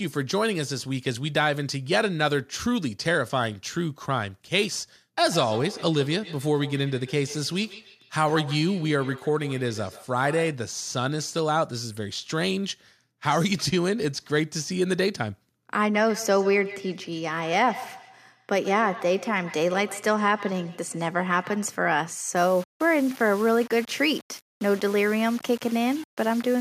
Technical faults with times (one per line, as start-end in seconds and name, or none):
5.30-10.64 feedback echo between two devices
15.94-21.76 feedback echo between two devices
22.37-26.61 low bit depth without dither